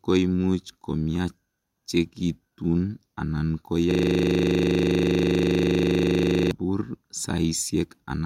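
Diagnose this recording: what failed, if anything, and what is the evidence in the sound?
The failure is at the driver or buffer stage: a system hang loop. From 3.91 s to 6.51 s the speech stops moving forward and a single 40 ms fragment repeats identically, about 65 times, giving a rough, buzzing stutter at 25 Hz. The host or driver stopped delivering new audio while the hardware kept replaying the same ring buffer. The 40 ms period fits a buffer of that length.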